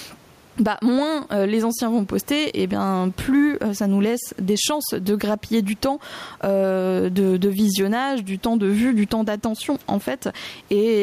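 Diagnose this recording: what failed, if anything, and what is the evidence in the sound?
Gain pumping throughout: the gain swings about 10 dB under loud speech, likely a fast limiter fighting overcranked mic gain.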